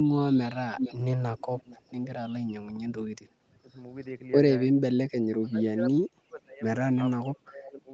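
At 0.76 to 0.97 s there's an echo leak, a delayed copy of the speech arriving about 0.45 s late and nearly as loud as the original. It comes back faintly at 1.38 to 1.92 s. The likely cause is a far-end echo canceller letting loudspeaker pickup through.

Then there's speech suppressed in double talk, likely from the canceller ducking everything while both sides overlap. At 3.49 to 3.73 s the level dips by roughly 15 dB. It drops much harder, by around 30 dB, at 5.39 to 6.62 s, and by about 25 dB at 7.18 to 7.92 s.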